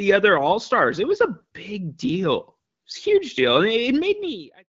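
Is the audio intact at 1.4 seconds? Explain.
No. From 1.38 to 1.44 s there are AMR bit errors, hitting a few percent of bits across what sounds like several frames. Flipped low-protection bits misplace the excitation pulses and skew pitch, gain and spectral values, so the speech briefly turns hoarse and gargly.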